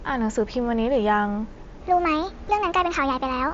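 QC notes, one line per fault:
1.81–3.53 s: section at the wrong speed. Playback runs about 1.39 times fast, raising pitch roughly five semitones. The likely cause is a clock mismatch. On a spectrogram, harmonics sit spaced wider and shifted upward.
2.48 s: concealed Bluetooth headset packet loss. One lost packet of about 7.5 ms is filled by repeated recent waveform and is almost hidden. A waveform shows a brief periodic repeat.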